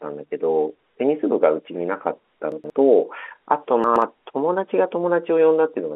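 At 2.52 to 2.70 s, and again at 3.84 to 4.02 s, the speech briefly jumbles. These are chunks out of order. A chunk of about 60 ms arrived late and played after the two chunks that should have followed it, so nothing is missing but the 180 ms is scrambled, with three hard joins. The surrounding audio keeps its narrow telephone band from the G.711 coding.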